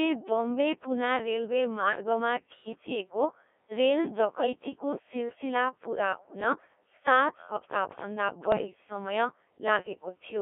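Right from the start the whole clip runs through a Codec 2 vocoder, and the heavy, buzzy, robotic character suggests one of its lowest modes, around 1.3 kbit/s. The decoder isn't rebuilding the actual waveform. It resynthesises speech from sine waves using only pitch, voicing, level and a rough spectral envelope, squeezed into a band of about 250 Hz to 3.5 kHz, so everything comes out synthetic and thin.

On top of that there are three bursts of bit errors on digital voice radio. The first is at 1.80–2.00 s, right after "पुना रेलवे". The second, at 4.36–4.47 s, is short but sounds like a much denser error hit. The third is at 8.52–8.67 s. Corrupted bits land in frames where each bit steers pitch, level or voicing, so those moments lurch into warbles, bleeps and garbled robotic noise.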